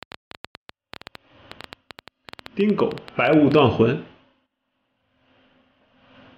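A train of clicks runs from 0.03 s to 3.6 s: around forty short pulses at roughly 9.5 per second, spaced unevenly. Each has much the same sharp shape and peaks about 5 dB above the surrounding sound, so it is heard as an irregular ticking or popping laid over the audio, including in quieter stretches. The likely cause is interference from nearby equipment or a faulty connection or power supply injecting repeated pulses into the signal path.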